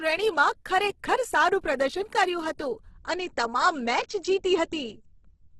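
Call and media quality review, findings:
Speech grainy and rough throughout, little swirling. Likely Opus compression in music (CELT) mode, heavily starved: bands filled by folding or noise, which fits roughly 12 kbps. Spectrogram: hard ceiling near 12.1 kHz, few holes, smeared noise-like texture in place of harmonic lines above mid-band.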